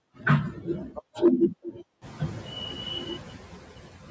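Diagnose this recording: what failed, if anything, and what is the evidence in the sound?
Noise suppressor artifacts run through the whole clip, introduced at the call-processing stage. The suppressor estimates steady background noise in each frequency band and pulls it down frame by frame, by about 7 dB here. The residual noise therefore dips in the gaps between words and comes back up underneath them. The room noise rises by about 23 dB at around 2 s, leaving the noise floor only about 16 dB below the speech.

Hard clipping occurs from 1.25 to 1.45 s, most likely at the input converter or the gain stage feeding it. For those two tenths of a second the signal is driven about 4 dB past what the stage can represent, so the waveform peaks are sheared flat. The flattened tops generate spurious high harmonics, which are audible as a brief crackle on the loudest peaks rather than a sustained fuzz, consistent with the modest overdrive.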